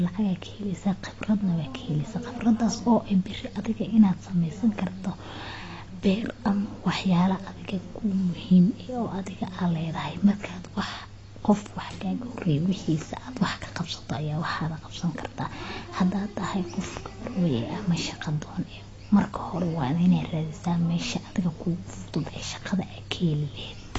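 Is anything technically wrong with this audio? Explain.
Yes. AAC compression runs through the whole clip: the speech sounds dull and smeared, with nothing above 8 kHz. The likely cause is AAC-LC at a low bitrate, fitting 24 kbps, where the encoder lowers its cut-off and coarsely quantises the remaining frequency lines.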